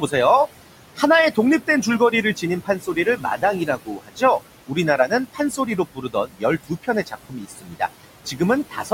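A speech recording where the noise suppressor is working hard throughout, pulling what it judges to be steady noise down by about 18 dB frame by frame. The room noise, which sits about 14 dB below the speech, dips in the gaps and swells back under the talking. The same processing is also producing speech cut by the noise suppressor: between 0.96 and 4.22 s, and again from 4.67 to 8.91 s, it mistakes parts of the voice for background and drops them by as much as about 18 dB. Soft consonants and word endings come out swallowed or faint, adding up to roughly a second in the first stretch and about a second and a half in the second.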